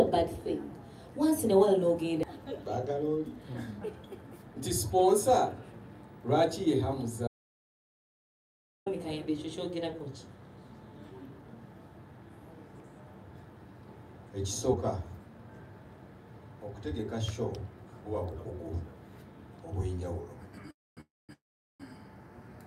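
From 7.28 to 8.86 s the sound cuts to total silence for about 1.59 s, room tone included: an audio dropout to silence, likely from lost input.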